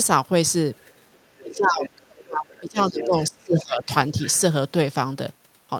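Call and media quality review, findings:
Other side's voice leaking through at 0.78–1.18 s, 1.37–1.57 s, 1.83–1.9 s, 3.0–3.06 s and 4.27–4.37 s. Far-end speech audible faintly at first, then only somewhat below the talker by the later scraps. Likely residual loudspeaker echo the echo canceller failed to subtract from the mic signal.

Speech suppressed in double talk, 1.4–3.92 s. Talker's level dips in pieces, roughly 2 s affected in total, deepest drop around 35 dB, coinciding with far-end leakage. Likely the echo canceller's suppressor misjudging overlap as echo and attenuating near-end speech together with it.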